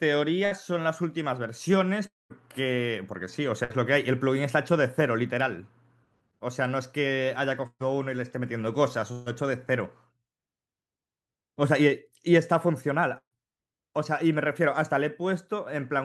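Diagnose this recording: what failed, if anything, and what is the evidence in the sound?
The network stage lost bursts of packets five times, at 0.45–0.53, 3.64–3.73, 7.67–7.82, 9.12–9.28 and 13.18–13.41 s, each dropping 60 to 140 ms of speech. The receiver stretched the last sound into a decaying buzz or hiss, fading to silence at 7.7 and 13.2 s, then resumed with that speech gone.

From 2.07 to 2.32 s there is a long network dropout, likely a stall in the network path, costing about 240 ms of speech. The concealment holds the last sound briefly, then falls away to silence for most of the gap before the audio resumes further on.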